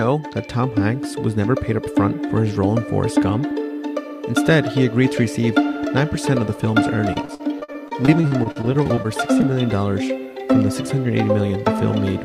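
From 7.13 to 9.44 s there is repeated packet loss, heard as a robotic sound. Over this stretch, around twenty short holes open in the audio, the longest about 47 ms. Each hole is filled by stretching the last sound forward, with roughly half a second patched this way in total, about a fifth of the span. About 380 ms is simply missing. The result is choppy, with pieces dropping out.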